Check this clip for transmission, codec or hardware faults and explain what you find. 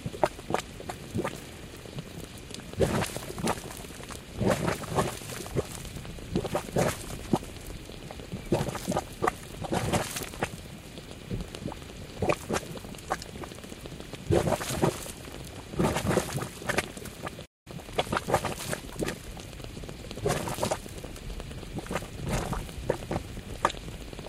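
Two faults appear, both on the playback side rather than in the recording of these everyday sounds.

A playback stall hits at 17.45 s and lasts until 17.67 s. The player's buffer most likely ran dry or its thread was held up, so output fell silent for about 0.2 s. The sound cuts out abruptly mid-flow, then resumes.

Time-compressed catch-up follows from 17.67 s to 19.69 s. To recover the backlog built up during the stall, the player trims and cross-fades tiny slices, running about 1.1 times fast. The sound is audibly hurried at unchanged pitch.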